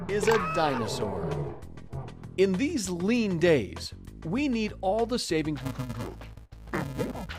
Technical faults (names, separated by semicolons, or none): interleaved audio read as planar